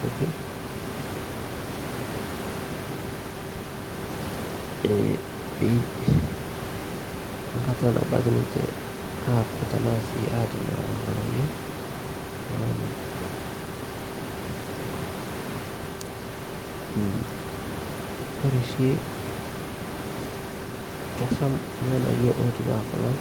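Nothing in this speech goes wrong on the system's side, and the only thing to notice is the room's own background noise sitting about 10 dB under the talking.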